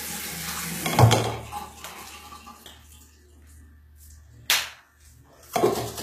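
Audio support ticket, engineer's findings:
Throughout, whole clip: treble present but synthetic, gritty and metallic on the bright sounds, with nothing above 14.9 kHz. Likely HE-AAC compression at a very low bitrate, consistent with roughly 20 kbps. Spectral band replication: the codec sends only the lower band and fills the top by copying lower bands upward under a coarse envelope, so upper harmonics don't line up. Unlike a plain low-pass, the highs remain bright. Unlike MP3 at low bitrate, there's no swirly warble; the damage is the misaligned, grainy top end.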